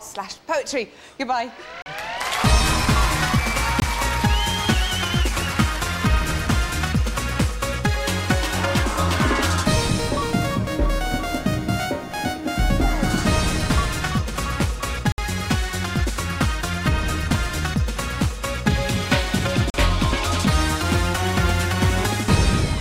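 Blocks of digital silence at 1.82 s (40 ms), 3.80 s (20 ms), 15.12 s (60 ms) and 19.70 s (40 ms) cut the sound abruptly to silence and back, as when output buffers go unfilled in time, leaving short holes rather than ticks.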